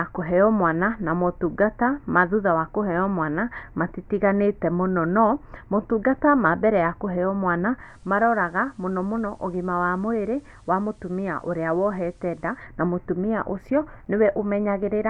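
Speech in which, after "mbere ya kũheo mwana", a hybrid radio shows digital radio blending to analogue FM from 7.78 to 12.66 s. Over 150 ms cross-fades, faint hiss rises and level falls about 4 dB, unlike a dropout's silence, before "na mũtumia ũcio".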